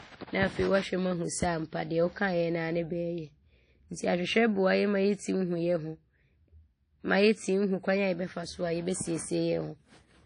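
Throughout the speech, plainly audible ringing and washy, breathing hiss and nothing above 10.1 kHz point to coarse transform quantisation, likely WMA compression near 32 kbps.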